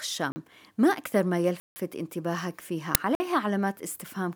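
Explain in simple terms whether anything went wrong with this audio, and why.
Three blocks of digital silence cut the speech at 0.32 s, 1.6 s and 3.15 s, lasting 40, 160 and 50 ms. The audio drops abruptly to nothing and back. At 2.95 s, an uninitialised buffer plays leftover memory as a brief, loud crack.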